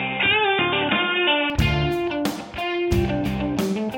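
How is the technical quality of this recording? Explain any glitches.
The recording has one glitch at the start. From 0.0 to 1.5 s, nothing above 3.8 kHz comes through, so the sound is dull and boxy, then opens up cleanly. This is likely an input switched to a poorer device, with a narrower band. The change is seamless, level stays about the same, and faint added noise sits far below the signal.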